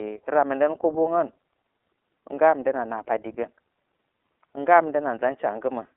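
Speech coded throughout with the iLBC codec, limited to about 300 Hz to 3.6 kHz. Its plainly rough, synthetic texture fits 30 ms frames at 13.33 kbps.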